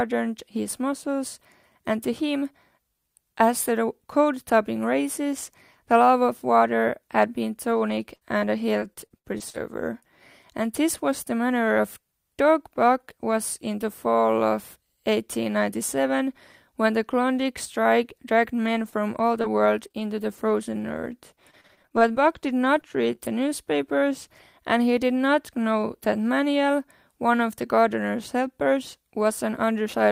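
From 7.71 s to 10.04 s, packets kept going missing or arriving too late, and the receiver covered each hole by stretching the speech that came just before it. The holes come close together, around nine of them, the longest 63 ms and about 300 ms of audio lost in total. With roughly 13 percent of the stretch patched, the speech turns choppy. This is repeated packet loss, and pieces of sound are missing.

Between 18.66 s and 23.33 s, the loss is spread out instead. Single packets drop or arrive late here and there, and the receiver fills every small hole by continuing the preceding sound. These are scattered short gaps, roughly fifteen in all, the longest around 30 ms, with only about 5 percent of the span concealed. The speech stays clear, marked by brief ticks, smears and small hiccups.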